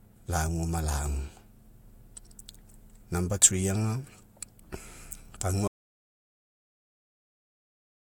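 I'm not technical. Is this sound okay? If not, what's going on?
No. The recording likely lost its input at about 5.68 seconds, through a disconnected microphone, a failed link or an accidental mute, and kept writing nothing. That is an audio dropout to silence: the speech cuts off abruptly, and dead, total silence runs to the end.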